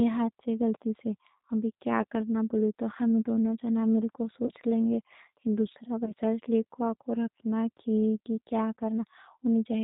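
A speech recording carried through the G.729 codec. Nothing above 4 kHz survives, and the speech sounds rough and synthetic, which fits an 8 kbit/s stream. VoIP packet loss concealed by the speech codec occurs at 4.46 to 4.51 s and 6.05 to 6.12 s. About 30 ms and 20 ms of audio go missing. The decoder stretches the last sound into a fading buzzy tone or coloured noise, and it stays weak briefly afterwards.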